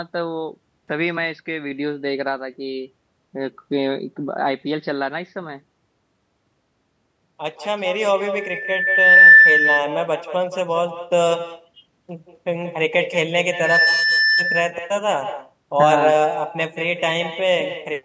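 A speech recording from a call where the far end played the audio over a loudspeaker with no echo canceller, so its microphone sent the talker's voice back. Every phrase is trailed, around a fifth of a second later, by a thinner copy about 7 dB below the speech. From 13.51 to 14.51 s, a loudspeaker feedback squeal occurs: the microphone-to-speaker loop exceeded unity gain at 1.8 kHz, and a single tone swells over roughly a third of a second to sit well above the speech.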